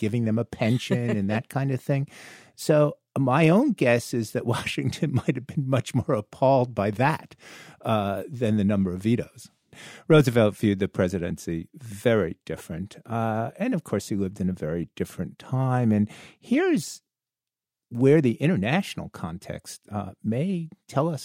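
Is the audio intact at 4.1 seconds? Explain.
Yes, the audio is intact at 4.1 seconds, with no dropout, click, distortion or other fault at that moment.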